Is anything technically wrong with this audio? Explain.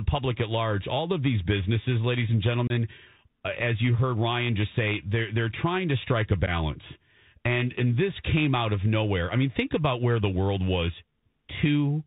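Yes, two things. Right through the clip the speech has been through a Bluetooth CVSD headset codec. Nothing gets above 4 kHz, s sounds come out scratchy, and there's a grainy hiss under everything, which fits a 64 kbps CVSD link. The codec tracks the waveform one bit at a time with an adaptive step, and that step can't keep up with bright, fast-moving sound.

There's also unconcealed Bluetooth headset packet loss, once from 2.67 to 2.72 s (about 26 ms missing, several packets' worth) and again from 6.46 to 6.49 s (about 11 ms, a few packets). Lost voice packets were replaced with silence or an idle pattern rather than patched over, so you get short, hard-edged holes, and the speech comes back briefly quieter as the codec recovers.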